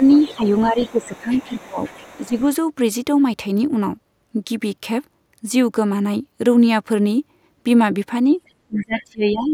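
From the start to 2.42 s a faint second voice, roughly 25 dB below the main talker, runs underneath: the other side's voice leaking through, likely far-end loudspeaker sound the echo canceller left in the microphone. Over the same opening, from 0.0 to 1.79 s and again at 2.2 to 2.37 s, the main speech sags by around 10 dB, about a second in all. This is speech suppressed in double talk, where the canceller likely ducks the near talker while both sides are active. Unlike a level fade, the dips track the overlap. From 8.46 to 9.04 s the leaking voice returns at a similar low level, and from 8.68 s to the end the suppression deepens to around 30 dB.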